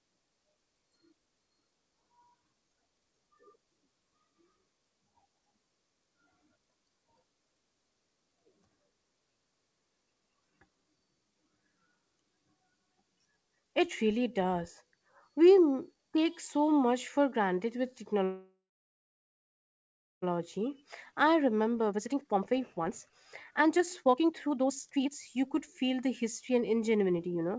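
Right after "much for granted with", at 18.24 s, the speech stops for 2.0 s in a call audio freeze, likely from packets stalling and the jitter buffer running dry. The last sound carries on briefly as a fading buzz or hiss, then 1.66 s of silence follows. On a spectrogram this shows as smeared horizontal bands trailing off into a blank stretch, and the waveform drops to a flat line. Nothing is lost: the speech resumes where it broke off at 20.24 s.

From 20.31 s to 27.56 s comes a jitter buffer speed-up. The receiver catches up on the backlog by cutting many tiny pitch-period slices, trimming about two seconds in total. Speech runs at 127% speed with unchanged pitch and sounds rushed. Harmonic spacing on the spectrogram stays put while syllables crowd closer together, and the waveform's envelopes are compressed in time. Throughout, the G.722 call path leaves nothing above 8 kHz.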